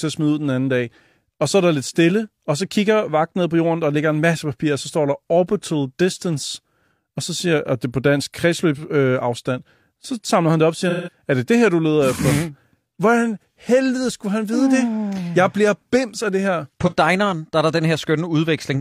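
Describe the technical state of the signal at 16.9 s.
At 16.87 to 16.94 s, just before "der er der", there is AAC frame loss with concealment: a roughly 43 ms gap, which fits one lost frame, patched from the previous spectrum. Unlike a plain dropout, it never falls silent; it sounds briefly smeared and phasey.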